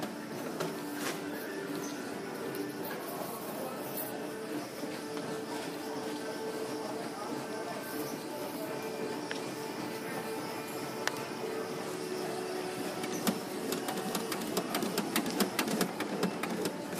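No technical faults can be heard anywhere in the recording. Nothing in the audio breaks, stalls or changes character at any point.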